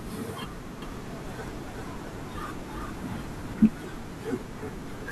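From 0.82 s to 3.54 s the speech carries a doubled audio track: a second full-band copy trails roughly 0.4 s behind at around 5 dB quieter, likely from a second, slower capture path. Unlike echo, it has no decay or room colour, and it cuts in and out abruptly.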